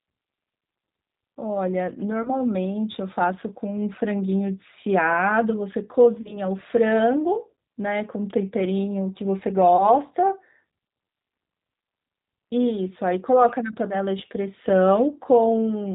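The whole recording carries G.729 codec damage: 8 kbit/s speech rebuilt from a filter and pitch pulses sounds rough and synthetic. The spectrogram is empty above 4 kHz. At 2.23 to 2.30 s, 6.2 to 6.39 s, and 9.77 to 9.90 s, VoIP packet loss concealed by the speech codec stretches the sound into a fading buzz. The gaps are about 20, 40 and 20 ms, which fits one, two and one lost packets. The waveform sags in each gap, and the spectrogram shows smeared harmonics that recover only gradually.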